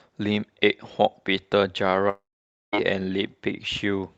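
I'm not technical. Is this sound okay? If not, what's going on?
No. Between about 2.09 and 2.74 s the call's network connection likely stopped delivering audio, a long network dropout. For about 0.65 s nothing new reached the listener. The receiving end first stretched the last bit of speech into a brief fading buzz, then fell to near silence for about half a second before the speech resumed, with that stretch missing for good. The rest of the call's sound is dulled, with nothing above about 8 kHz.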